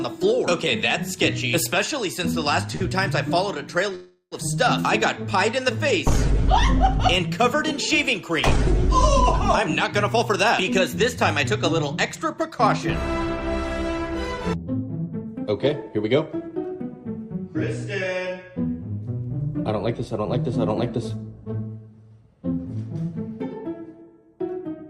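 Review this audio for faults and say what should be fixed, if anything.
A short stall from a late packet occurs at 2.75 to 2.84 s. One packet missed its playout time, the jitter buffer ran dry, and the receiver stretched the last sound for about 52 ms until the packet arrived. Playback then resumed from the same point, so nothing is lost, but the sound holds briefly with a slight buzz or dip. On a spectrogram the harmonics run flat and unchanging for that stretch. On the waveform one cycle shape repeats. A slightly deeper buffer target would absorb a delay this small.

A call audio freeze runs from 3.95 to 4.35 s. The sound hangs for about 366 ms as a fading buzz or hiss, and the last 70 ms fall to silence before the audio picks up where it stopped. The likely cause is packets held up in the network long enough to empty the jitter buffer completely. A spectrogram shows a smeared, decaying copy of the preceding spectrum ending in a blank gap. 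The waveform shows a repeating pattern that dies away to a flat line. Addressing network congestion or jitter on the path would stop such long holds.

Jitter buffer speed-up appears from 10.17 to 16.84 s at 103% speed, trimming roughly a fifth of a second, and again from 19.99 to 22.66 s at 105%, trimming roughly 0.15 s. In both stretches the buffer held more audio than its target, so the receiver cut many short pitch-period pieces to catch up. Pitch stays the same, but the pacing of the 105% stretch sounds slightly hurried. The spectrogram looks compressed in time, with events closer together. The waveform shows tiny splices between cycles. Shrinking buffer excess more gradually, or tolerating it briefly, would make this less audible.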